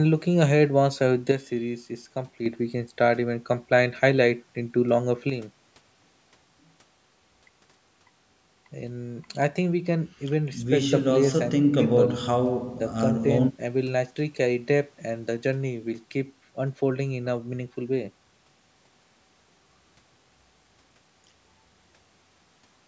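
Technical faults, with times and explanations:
1.32–2.46 s and 5.30 s to the end, one channel drops out: the speech abruptly falls about 6 dB, likely because one stereo channel went silent before the mono sum. The waveform envelope steps down sharply, and the spectrogram darkens evenly across all bands up to the 8 kHz call-processing ceiling.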